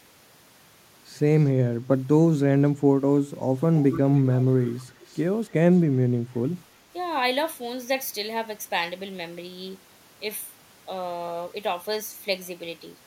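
From 3.79 to 4.45 s an echo leak appears: a copy of the speech trailing the original by 283 ms, roughly 10 dB down, likely from a far-end loudspeaker whose echo canceller let part of the pickup return. It recurs at 4.63 to 4.82 s, about 20 dB down, and at 5.06 to 5.21 s, near 35 dB down. A spectrogram shows fainter duplicates of the speech's harmonic bands shifted 283 ms later, weakening with each recurrence.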